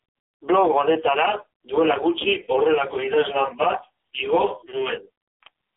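Throughout, the speech went through the AMR narrowband mobile codec at a very low mode, pointing to about 5 kbps. Nothing above 3.8 kHz survives, and the voice sounds heavily buzzy and synthetic.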